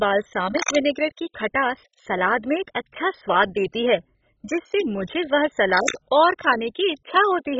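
Throughout, the speech sounds dull and gurgling, likely from MP2 compression at a very low bitrate near 16 kbps. The spectrogram is empty above 7.5 kHz, with flickering upper bands. From 0.57 to 0.76 s and again from 5.70 to 5.97 s, cable scratch noise, likely from a worn contact, adds dense rustling bursts about as loud as the speech, seen as ragged broadband smears on the spectrogram.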